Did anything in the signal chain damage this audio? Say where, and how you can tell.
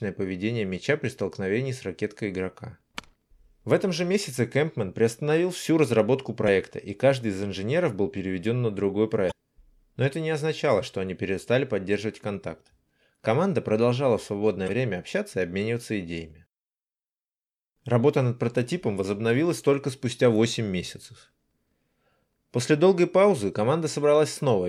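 Yes: brief glitches at 6.45–6.49 s (after "приостановил всю разработку"), 9.28–9.32 s (after "был переведен на другой"), 14.65–14.69 s (after "продолжала в") and 23.51–23.55 s. This is damaged data in a compressed stream at the codec stage. Corrupted frames make the decoder lose sync and jump ahead to the next frame header.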